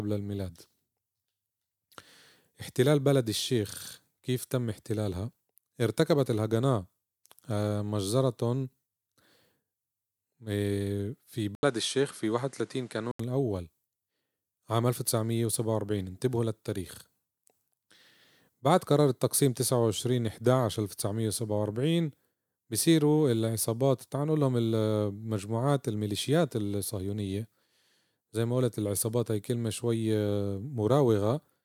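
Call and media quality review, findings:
Speech dulls at 11.55 s, back to full at 13.19 s, with an 80 ms dropout at the switch. Likely input switched to a poorer device. Nothing above 11.4 kHz on that mic, new hiss roughly 35 dB under the speech, level about the same.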